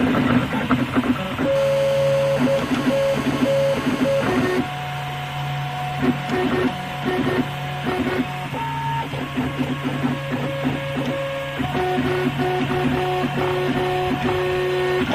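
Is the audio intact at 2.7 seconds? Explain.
No. From 1.56 to 4.59 s, a nearby 2G phone on a call bursts 217 times per second; rectified, this gives GSM phone buzz: a steady, raspy 217 Hz rasp about 12 dB below the signal.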